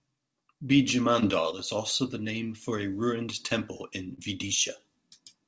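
Speech carried over a call link whose band stops at 8 kHz, which fits a G.722 codec at 64 kbps, shows two short concealed packet losses. From 1.20 to 1.24 s, just before "is also the name", about 20 ms of audio failed to arrive and was patched by extending the preceding sound, heard as a brief smear. The same happens from 4.14 to 4.20 s, right after "a ruined temple in", where a 40 ms gap is bridged. Between 1.51 and 1.59 s, still ahead of "is also the name", the level drops abruptly by about 6 dB and then recovers, the signature of one channel dropping out, likely a lost stereo channel folded into the mono sum.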